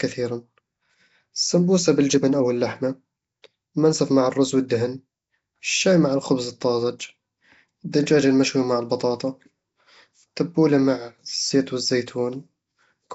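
From start to finish the speech carries a rough, hissy halo and a smeared, underwater character, with nothing above 7.7 kHz. The codec damage is plainly audible and points to Nellymoser compression, likely at about 32 kbps, where starved bands are filled with noise.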